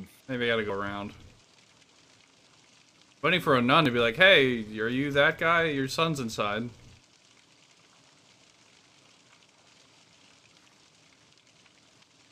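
Small forward jumps in the sound at 0.70 s, 3.85 s and 6.18 s, the first skipping around 70 ms and the others around 20 ms, likely dropped buffers (overrun), where unread audio was overwritten and the edges spliced together.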